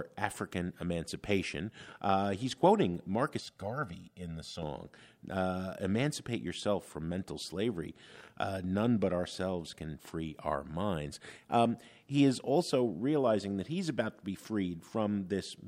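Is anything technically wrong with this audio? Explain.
Yes. From 3.40 to 4.63 s, just after "he's quoting", the speech shows channel delay (comb filtering). One channel runs roughly 1.5 ms behind the other, and when the two are summed to mono, components common to both cancel at evenly spaced frequencies, the first around 300 Hz. The speech turns hollow and phasey for that stretch. A spectrogram shows fixed dark horizontal notch bands stacked up the spectrum.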